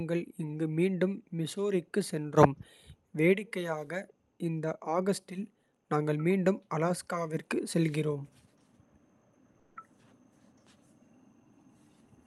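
At 9.59 s the speech breaks into a smeared, buzzy continuation of the last sound that fades over roughly 0.17 s, with no stretch of full silence, before the talker resumes at 9.77 s with that portion gone. This is likely a long network dropout: the audio stopped arriving, and the receiver's concealment stretched out the final sound to cover the gap. It plays over the Opus call path, whose top end stops near 12 kHz.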